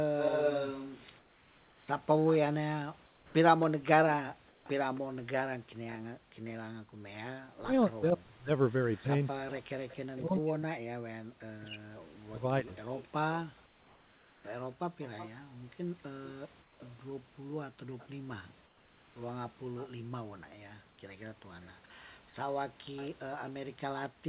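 From 0.18 to 6.5 s there is an echo leak. The far end's echo canceller likely failed to remove its loudspeaker pickup, so a copy of the speech returns 274 ms late at about 5 dB below the voice. It sounds like a distinct doubling.

Within that stretch, comfort noise replaces the background at 1.18–1.88, 3.06–3.34 and 4.48–4.66 s. The sender likely stopped transmitting in the pauses, and the receiver filled them with synthetic noise. The room's textured background becomes a flat, featureless hiss about 3 to 5 dB quieter.

From 7.48 to 12.7 s, speech is suppressed in double talk. With both sides talking, the echo canceller likely mistook the talker for echo and turned the voice down. It dips by up to about 40 dB and drops out in pieces, roughly 3 s in total.

From 12.66 to 19.89 s the echo leak returns, again delayed 274 ms but much weaker, about 25 dB below the speech. It is a faint trailing ghost rather than a clear repeat. 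Comfort noise again swaps in for the background at 13.66–14.44, 16.62–16.8 and 18.66–19.16 s, with the same flat, slightly quieter hiss.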